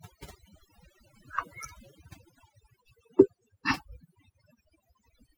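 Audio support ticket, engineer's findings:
Noise suppression set too aggressive; overdone noise removal across the whole speech clip. Frequency bands near the noise estimate get pulled far down or gated out, taking low-level voice detail with them. Result: near-silent background with twinkling specks.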